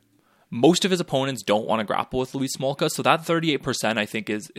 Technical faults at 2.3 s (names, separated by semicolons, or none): none